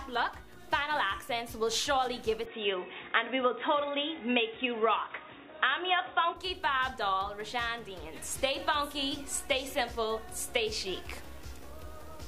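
From 2.46 to 6.36 s the sound turns dull and boxy, likely an input switched to a poorer device; the spectrogram goes empty above 3.8 kHz, with no gap and no level step.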